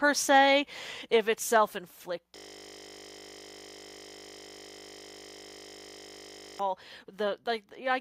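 At 1.02 s and again at 2.04 s the speech and its background drop abruptly in level, first by about 5 dB, then by about 3 dB. This is a microphone volume stepped down, likely the call software lowering the input gain in two steps. The waveform envelope shrinks suddenly at each point, and the spectrogram dims evenly across all frequencies.

From 2.36 s to 6.60 s a system hang loop replaces the speech. A single 20 ms slice repeats over two hundred times while the machine is frozen, producing a steady 50 Hz buzz. The waveform shows identical 20 ms cycles, and the spectrogram shows evenly spaced horizontal harmonic lines at multiples of 50 Hz.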